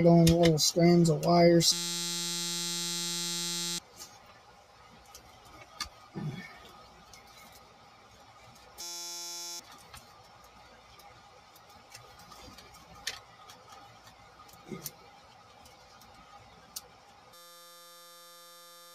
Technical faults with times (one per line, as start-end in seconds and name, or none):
0.00-18.94 noise suppressor applied to music or sounds
1.72-3.78 system hang loop
8.81-9.60 system hang loop
17.34-18.94 system hang loop